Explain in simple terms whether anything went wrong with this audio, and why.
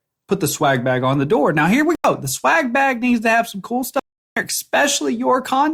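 Block of digital silence at 1.95 s and again at 3.99 s: the speech cuts abruptly to complete silence for 0.09 s, then 0.37 s. This points to the playback program failing to deliver audio in time.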